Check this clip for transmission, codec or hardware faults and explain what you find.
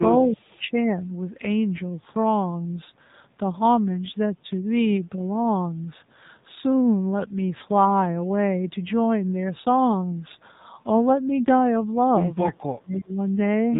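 Two faults are present: narrowband mobile coding throughout, and two brief dips in the speech.

AMR narrowband mobile codec, throughout: nothing passes above 3.8 kHz, and the buzzy, synthetic voice points to a low mode, around 7.4 kbps.

Speech suppressed in double talk, 0.28 to 0.97 s and 12.49 to 13.18 s: the voice drops by around 25 dB, then around 30 dB, likely because an echo canceller turned this talker down along with the loudspeaker echo.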